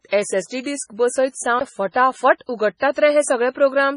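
From start to finish the speech carries heavy watery, swirling artefacts and has nothing above about 10.6 kHz, likely from MP3 compression at a low bitrate, around 24 kbps. Unlike a plain low-pass filter, the damage shifts from frame to frame as weak frequency lines drop in and out.

At 0.63 to 0.66 s a brief hiss of about 26 ms rises just ahead of a sharp onset, which sounds softened. This is pre-echo: coding noise sized for the loud attack spread back into the quiet moment before it. Unlike reverb or a true echo, the smear comes before the attack rather than after.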